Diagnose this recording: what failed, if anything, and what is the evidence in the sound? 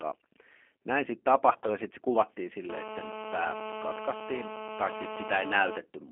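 The whole recording has passed through a G.729 codec, a codec-stage fault. The audio is confined to a telephone line band of roughly 250 Hz to 3.4 kHz, and the speech sounds plainly rough and synthetic, which fits an 8 kbit/s coder. The decoder does not transmit the waveform. It rebuilds speech from a vocal tract filter, a pitch predictor and a few pulses per frame, and that sparse excitation causes the coarse, artificial texture heard throughout.

From 1.53 s to 1.76 s, between "näin sitten" and "sitten se kuvattiin", there is VoIP packet loss concealed by the speech codec. This is a network fault that the decoder has covered over. The sound points to about 50 ms of audio lost, scattered across roughly 120 ms in gaps no longer than 20 ms each. During those gaps the decoder repeats its last pitch and filter at falling gain, which gives brief buzzy, smeared stretches. Because each frame builds on the previous one, the speech stays weak or distorted until about 1.76 s.

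From 2.69 s to 5.78 s a GSM phone buzz is present. This enters at the analogue wiring stage, not in the codec. A hard, raspy buzz at 217 Hz with many harmonics sits about 9 dB below the speech, and it has no relation to what is being said. A nearby 2G handset transmitting in 217 Hz bursts is inducing this, and some circuit in the audio path rectifies those pulses. The buzz holds steady over the whole stretch, which matches a phone in an active call.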